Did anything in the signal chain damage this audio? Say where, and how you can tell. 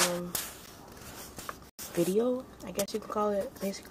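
Yes: blocks of digital silence at 0.66 s, 1.70 to 1.79 s and 2.86 to 2.88 s, at the driver or buffer stage. Each cuts out and back without a fade. The 93 ms and 23 ms holes fit unfilled 4096- and 1024-sample buffers.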